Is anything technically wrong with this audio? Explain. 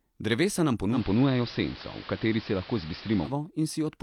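Yes. From 0.91 to 3.34 s, digital radio blending to analogue: the receiver cross-fades over 112 ms to the AM broadcast. The speech gains hiss around 20 dB down and shifts level by about 2 dB. The waveform shows a step in level.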